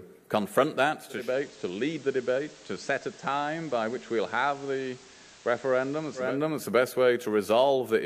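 At 1.07 s the receiver loses its digital stream and performs a digital radio blending to analogue, cross-fading over about 280 ms to the station's FM broadcast. The level drops by about 4 dB, and a steady hiss appears roughly 25 dB under the sound. At 6.42 s the receiver blends back to digital, restoring the level.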